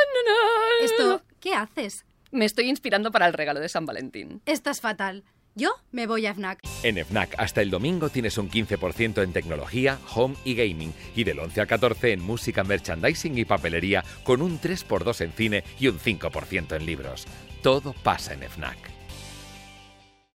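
No technical fault can be heard anywhere in the audio; the signal stays continuous and steady throughout.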